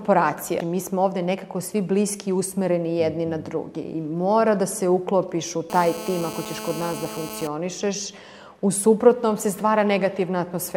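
A hard, raspy buzz with a dense stack of harmonics cuts in from 5.7 s to 7.47 s, holding steady at about 12 dB below the sound and pitched near 217 Hz. This is GSM phone buzz: a nearby 2G phone on a call transmits radio bursts 217 times a second, and the audio circuitry rectifies those pulses into an audible tone unrelated to the recorded sound.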